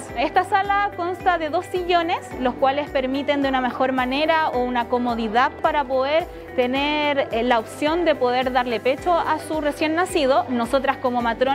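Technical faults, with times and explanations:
0.80 s, dropped samples: A single sharp click is heard. The cause is likely a sample or so going missing from the stream. The waveform then jumps straight from one value to a later one, with no smooth path between them. That sudden step carries energy at every frequency at once. So it shows as a thin vertical line across the spectrum. The gap lasts only a tiny fraction of a millisecond, far too brief to remove any sound.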